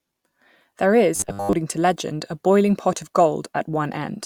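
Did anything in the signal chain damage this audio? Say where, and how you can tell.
Yes. From 1.16 to 1.53 s the speech turns into a rigid, metallic buzz locked at 100 Hz that only loosely tracks the words, with most of the audio there replaced. This is robotic sound from repeated short buffers, likely a starved driver or buffer stage looping a 10 ms block.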